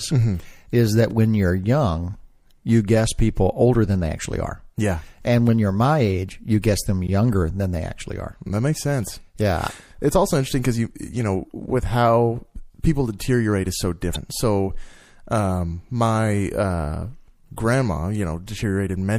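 Throughout, the speech sounds watery and swirly, with dulled treble and metallic edges on s sounds. This is likely MP3 compression at a bitrate that fits about 64 kbps: the encoder cuts off the high frequencies and lets weak frequency components flicker from frame to frame.

At 1.11 s, right after "is that" and before "when you're young you", a tiny tick breaks the flow. A second tick comes at 7.07 s, between "age you guess them" and "than they actually are". Both are blocks of digital silence, about 3 ms and 13 ms of silence. The signal drops straight to nothing and returns with no fade.

From 14.12 to 14.17 s, just after "people deteriorate is so", a brief squawk or blip interrupts the speech. This is damaged data in a compressed stream. Corrupted bytes made the decoder misread its frames, lose sync and hunt for the next valid frame header, which produces a short burst of garbled sound.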